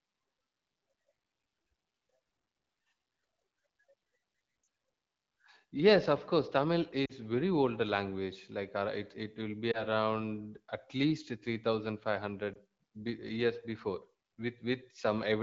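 Lost AMR speech frames at 4.63–4.67, 7.05–7.12, 9.71–9.83 s (after "it will be") and 12.53–12.56 s (before "be years"): the decoder repeats the last good frame with falling gain, heard as drops to near silence in the two-frame runs at 4.63 and 7.05 s and brief dips or warbles at the single-frame losses, in the AMR-WB audio.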